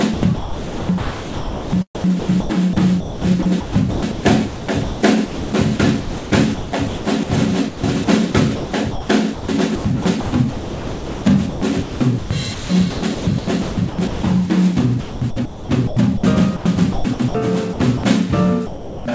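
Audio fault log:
0.14–7.29 s, 7.68–9.48 s, 9.75–14.22 s, 15.00–16.23 s, 16.92–17.34 s and 17.73–18.03 s: sound chopped by the voice detector. About 3.75 s, 0.72 s, 2.28 s, 0.66 s, 0.24 s and 0.12 s of sound are replaced in turn by synthetic comfort noise, likely because the sender's detector kept toggling transmission on quieter passages. The sound stutters.
16.56–16.65 s and 18.66–19.05 s: sound dropped by the voice detector. The sender likely judged the sound to be background and stopped transmitting, so the receiver filled the gap with comfort noise. Comfort noise replaces 90 ms and then 390 ms of sound before the signal returns.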